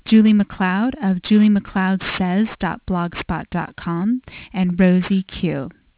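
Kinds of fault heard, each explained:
Aliasing: Energy above about 4 kHz was never filtered out before the rate dropped, which points to an 8 kHz rate, so it folds back as harsh, metallic hiss about 20 dB below the speech; a spectrogram shows mirrored, unrelated bands running hard up to 4 kHz.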